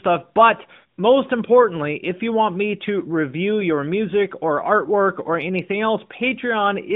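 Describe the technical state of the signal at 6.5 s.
At 6.5 s the speech is intact, with no fault at that point, carried through an AMR narrowband mobile codec path that limits the band to about 150 Hz to 3.6 kHz.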